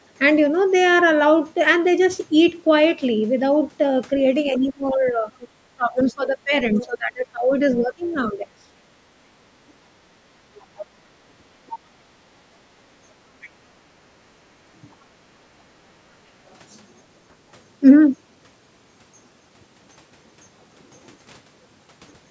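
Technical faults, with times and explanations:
4.51–8.96 s, 9.94–9.99 s and 13.90–13.95 s, speech suppressed in double talk: the voice dips and breaks up, by roughly 25 dB at worst over about three seconds in the first span, and by roughly 20 and 15 dB in the two brief dips. The likely cause is an echo canceller turning down both the talker and the loudspeaker echo while both sides talked at once.
4.54–6.86 s, 10.56–11.79 s, 13.41–13.50 s and 16.46–16.54 s, other side's voice leaking through: a second, fainter voice sits under the talker, about 15 dB down in the two longer stretches and about 25 and 40 dB down in the short scraps. This is likely loudspeaker playback the echo canceller failed to remove from the microphone.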